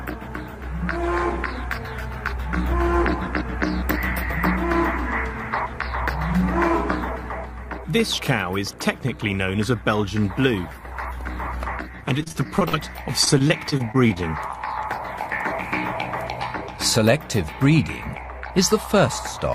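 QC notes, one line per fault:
12.23–12.82 s and 13.25–14.18 s, repeated packet loss (robotic sound): six, then eight short holes (up to 46 ms) are bridged by stretching the preceding sound, giving a choppy sound with pieces missing.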